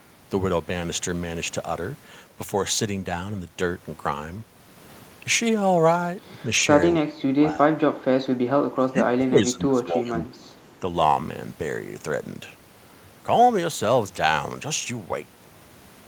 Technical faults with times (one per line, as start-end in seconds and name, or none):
6.97-7.81 speech suppressed in double talk
8.74-10.31 speech suppressed in double talk